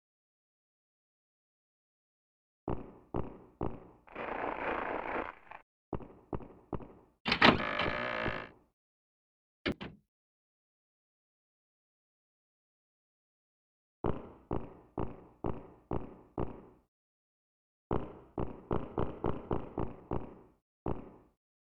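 Likely one channel inverted from 9.72 to 12.36 s: the audio falls by about 23 dB because reversed polarity cancels the shared content when the channels are summed to mono.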